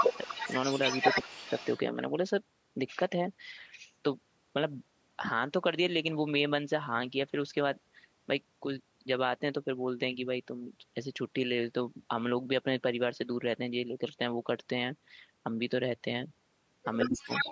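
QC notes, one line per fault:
0.00–1.79 s, 17.00–17.12 s and 17.29–17.51 s, echo leak: there's a second copy of the speech trailing the original by 159 ms, and it's about as loud as the talker, so it really smears things at the start and again in the last half second. Likely a far end on speakerphone whose echo canceller let its mic pickup of our audio slip back down the line.
0.24–0.30 s, 1.22–1.44 s and 17.09–17.32 s, speech suppressed in double talk: the talker dips while the echo is going. The first is a small dip, the second is a clear drop lasting a fifth of a second, and the last is a near-total cutout. This is likely the echo canceller hearing both sides at once, failing to tell the talker from the echo, and turning everything down.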